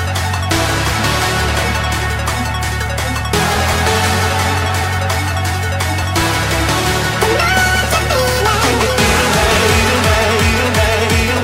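Nothing technical stands out here; the sound comes through without any fault worth pointing to.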